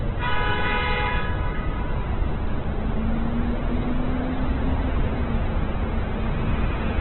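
From start to finish the sound is band-limited, with nothing above about 4.1 kHz, and heavily damaged: tones come out grainy, rough and noisy rather than swirly. That's likely Opus compression at a very low bitrate, around 8 kbps. Running in its music mode, the encoder holds each band's energy but, starved of bits, fills the detail with folded or noise content, and the narrowband limit accounts for the missing top end.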